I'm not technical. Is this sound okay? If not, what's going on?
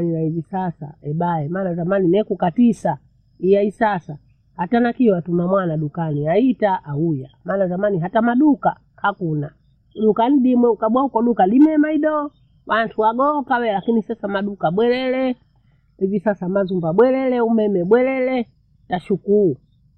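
Yes, no faults heard here.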